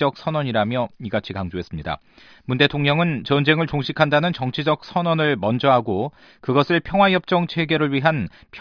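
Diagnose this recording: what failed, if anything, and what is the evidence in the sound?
Listening closely, nothing in the recording stood out as a failure at any stage.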